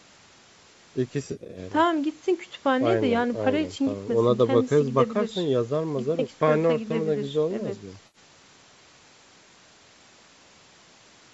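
AAC frame loss with concealment at 1.23 to 1.59 s: about 180 ms of frames drop out, scattered in short runs, and the decoder fills each gap from the last good spectrum. The result is a smeared, noisy patch. The same happens briefly at 8.07 to 8.18 s.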